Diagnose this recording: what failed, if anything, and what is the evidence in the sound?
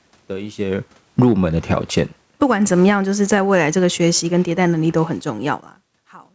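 The automatic gain falling happens in the call's microphone processing: from 0.61 s to the end, the speech and the room noise sink together. The gain control judged the input too hot and kept easing its gain down, so the level drifts rather than steps.

The automatic gain rising, also in call processing, works the other way twice. From 1.31 to 2.23 s the speech and background swell together by about 9 dB, then from 2.96 to 3.94 s by about 4 dB. The controller read the input as too quiet and pushed gain up.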